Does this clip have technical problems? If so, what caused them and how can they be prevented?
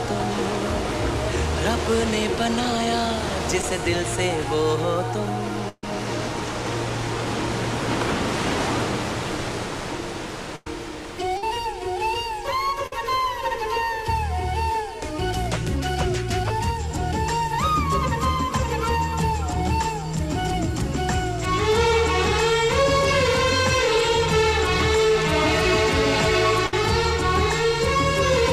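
Yes. At 3.61–3.64 s there is a brief smear where about 10 ms of audio is replaced by an extension of the preceding sound. This is short concealed packet loss: a packet arrived too late and the receiver filled the gap before blending back in. A larger jitter buffer or forward error correction would prevent it.

Held buzzes or fading hiss, each followed by a jump forward, occur at 5.69–5.84 s (about 140 ms lost, ending in a moment of silence), 10.56–10.67 s (100 ms), 11.37–11.43 s (50 ms), 12.86–12.93 s (50 ms) and 26.67–26.73 s (60 ms). Each is a burst of packet loss: consecutive packets went missing, so the decoder continued the last sound, faded it, and then resumed later, skipping the audio in between. A steadier network path with packet redundancy would prevent them.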